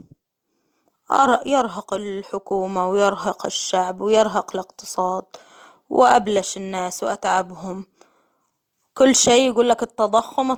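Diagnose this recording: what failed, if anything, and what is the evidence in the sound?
The fault sits in the codec stage, across the whole speech clip: low-bitrate audio saved at a high bitrate. Low-bitrate coding artefacts remain audible, though a spectrogram shows a generous ceiling near 20.2 kHz, which fits a likely Opus source at about 24 kbit/s re-encoded as 192 kbit/s MP3 that cannot restore what was discarded.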